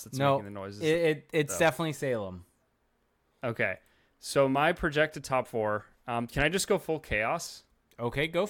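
No audible technical faults anywhere in the recording.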